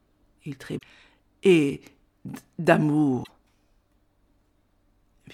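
At 0.75–0.82 s and 3.20–3.30 s, damaged data in the compressed stream makes the decoder misread frames and lose sync, producing a brief disturbance heard as a chirp, squawk, click or short hole.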